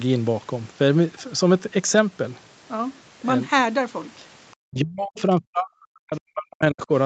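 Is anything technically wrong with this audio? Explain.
Yes, there are two faults, both in the second half of the speech.

Speech suppressed in double talk, 4.67 to 6.91 s: the echo canceller likely could not tell the local talker apart from loudspeaker echo while both were active, so it turned everything down. The speech is pulled down by as much as about 40 dB at the deepest point, for about two seconds in total within that span.

Other side's voice leaking through, 5.18 to 5.22 s: the echo canceller likely left part of the far side's loudspeaker sound in the microphone signal. A brief scrap of that second voice, about 40 ms long, comes through at around 25 dB below the speech.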